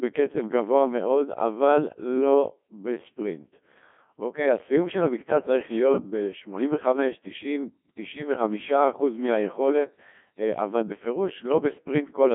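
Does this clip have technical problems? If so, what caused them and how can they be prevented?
Yes, two faults run through the whole clip.

A switching supply whistle is present from start to finish: a thin, high tone that wanders between about 3.7 and 3.9 kHz, close to 4 kHz, sitting roughly 30 dB below the speech. It comes from a switching power supply running in an audible burst mode or beating against another supply, so its pitch shifts as the load changes. To prevent it, power the recording chain from a linear or well-filtered supply, or keep switching adapters away from the audio wiring.

Codec 2 vocoder damage is heavy throughout. The speech sounds robotic and buzzy, confined to a band of about 200 Hz to 3.5 kHz with nothing above 3.7 kHz, which fits one of the very low-rate modes around 1.2 kbit/s. This vocoder transmits only pitch, voicing, energy and a coarse spectral shape, and the decoder rebuilds the speech from sine waves, so the original waveform is lost and fine detail smears. 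To prevent this, record or exchange the audio over a path that does not use a digital-radio vocoder, or use a higher-rate mode.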